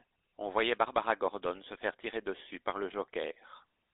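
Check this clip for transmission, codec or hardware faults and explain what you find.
There's one fault, and it runs the whole way through: the speech has gone through a GSM full-rate codec. The codec rebuilds the voice from a vocal-tract model excited by sparse, evenly spaced pulses, so it comes out buzzy and gravelly, plainly so. The line band runs roughly 250 Hz to 3.7 kHz, which fits the 13 kbps full-rate codec.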